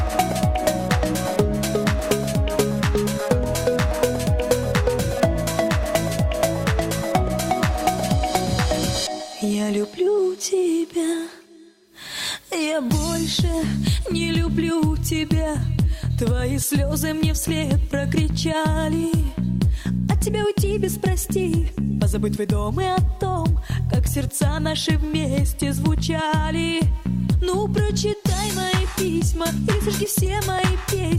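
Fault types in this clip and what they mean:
Nothing here stands out as a technical problem; the audio sounds fine all the way along, so there's no fault type to list.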